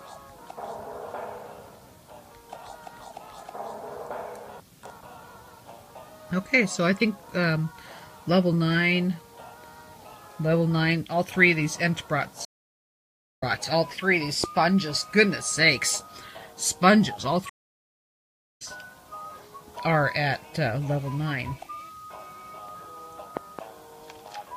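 At 12.45 s the sound cuts to silence for about 0.92 s, then returns at 13.44 s. This is a stream reconnect. The connection broke, the player restarted its decoder mid-stream, and the new decoder's first frame fades in. Unlike a plain dropout, the audio does not pick up where it stopped. It resumes roughly 0.7 s further on, so that stretch is lost. The same thing happens again from 17.49 s to 18.62 s, with about 1.06 s of silence and again a jump ahead of roughly 0.7 s.

At 14.44 s a single loud pop sits about 15 dB above the surrounding audio. It is likely a voltage step from a plug, switch, static discharge or driver glitch, added to the signal and shaped by the circuitry after it. Between 23.37 s and 23.61 s two pops occur, again about 15 dB above the audio, likely from the same kind of electrical pulse. What separates these pops from the reconnects is that the sound carries on underneath them without any gap or skip.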